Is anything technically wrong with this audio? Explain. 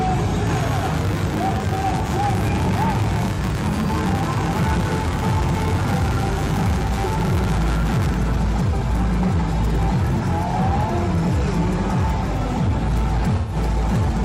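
Yes, three faults can be heard. Hard clipping runs throughout the clip: it is driven about 11 dB past full scale, so roughly 15 percent of samples are cut flat, which adds a harsh fuzz to every loud passage. Mains buzz runs from 0.47 to 8.18 s: switching spikes at twice the 50 Hz mains rate leak in, giving a steady, raspy buzz roughly 10 dB below the signal. AAC frame loss with concealment occurs at 3.34 to 3.39 s and 13.36 to 13.56 s. The decoder fills the gaps from the last good spectrum, giving a brief smeared patch at 3.34 s and a longer one at 13.36 s. The gaps are 43 ms and 128 ms, which fits one lost frame and three lost frames respectively.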